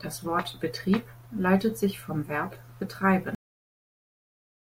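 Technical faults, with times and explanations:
3.35–4.75 s, cut-off end: the speech stops mid-sound and drops straight to digital silence with no decay, because the final buffers were never written out.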